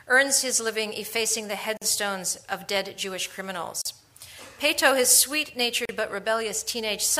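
Separately encoded pieces, roughly 2 s long, were joined without trimming the encoder's start delay and end padding, leaving a gap at a join of encoded pieces at 1.77 to 1.82 s (45 ms), 3.82 to 3.85 s and 5.85 to 5.89 s (38 ms each). The sound drops out, then resumes where it stopped.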